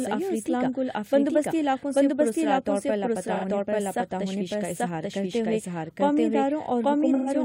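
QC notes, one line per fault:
throughout, doubled audio track: a second full-band copy runs about a second behind at roughly the same level, likely from the audio being captured twice through a slower path. Unlike an echo or reverb, the copy has no decay or room colour.
3.34–3.45 s and 7.14–7.30 s, AAC frame loss with concealment: about 85 ms is lost at 3.34 s, which fits two frames. About 128 ms is lost over roughly 170 ms near the end, with the longest gap around 150 ms. The decoder rebuilds the missing audio from the last good spectrum, so the gap at 3.34 s sounds like a smeared, noisy or phasey patch rather than a clean dropout to silence.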